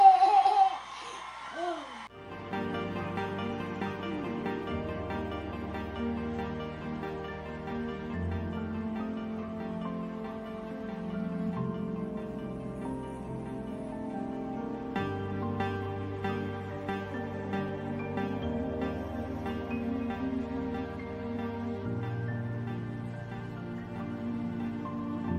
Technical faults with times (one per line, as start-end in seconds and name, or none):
0.00-25.39 mains buzz